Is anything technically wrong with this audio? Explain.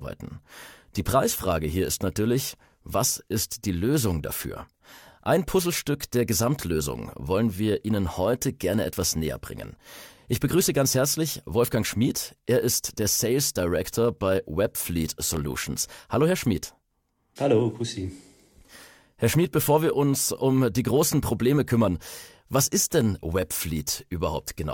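Yes, there is one fault. From 15.23 to 15.39 s, processor overload crackle: the processor missed a handful of sub-millisecond buffer deadlines, leaving tiny silent gaps that crackle through the speech.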